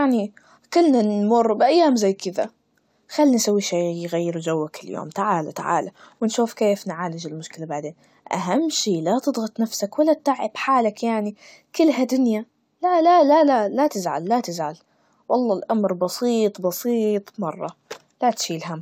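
A speech recording, and nothing is technically wrong with it.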